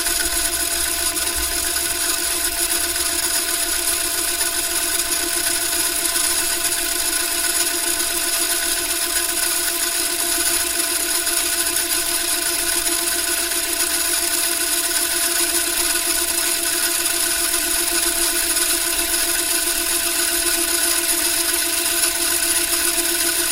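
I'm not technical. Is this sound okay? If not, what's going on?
Yes, the recording is technically sound, with nothing in the signal itself that points to a problem from the equipment or the way the audio was handled.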